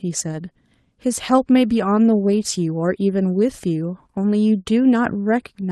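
No technical faults can be heard in this speech recording.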